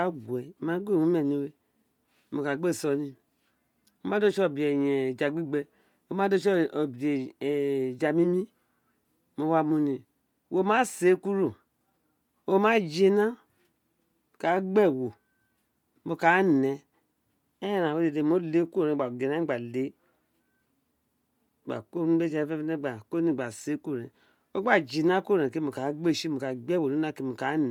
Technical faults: Bluetooth LC3 compression

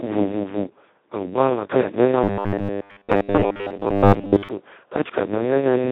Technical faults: Speex codec; robotic sound from repeated short buffers

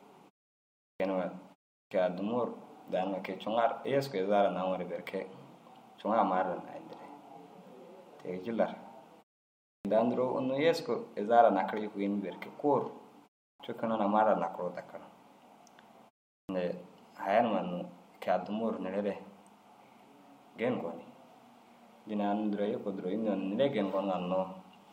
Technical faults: clipped start after a pause

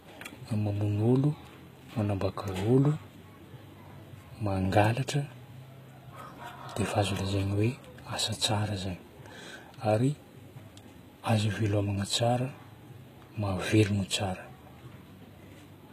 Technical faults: HE-AAC compression

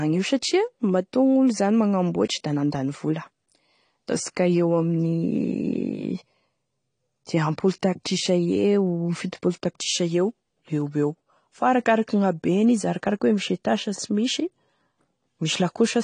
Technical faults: AAC compression

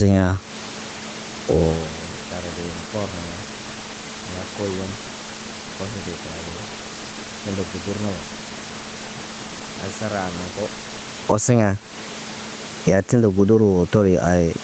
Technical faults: gain pumping

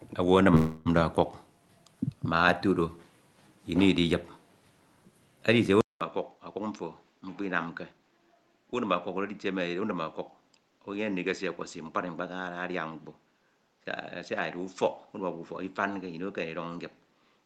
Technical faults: call audio freeze; input switched to a poorer device; jitter buffer speed-up

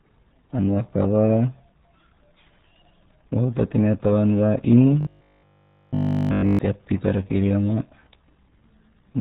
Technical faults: RealAudio 14.4 codec; robotic sound from repeated short buffers

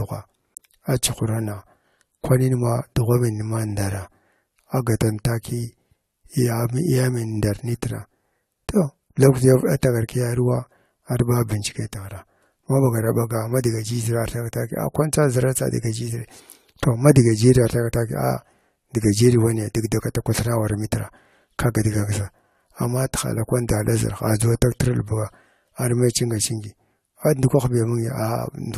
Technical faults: generation loss

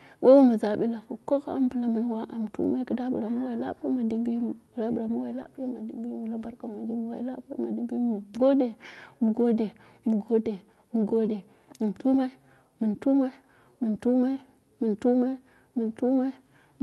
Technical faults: lost packet rebuilt from error correction; short concealed packet loss

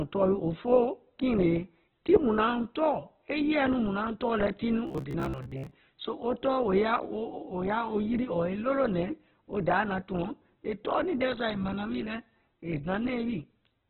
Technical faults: Opus compression; robotic sound from repeated short buffers

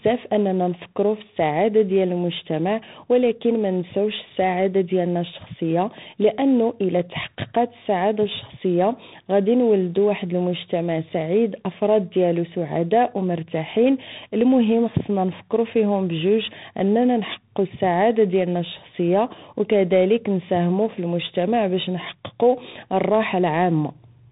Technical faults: tandem speech coding

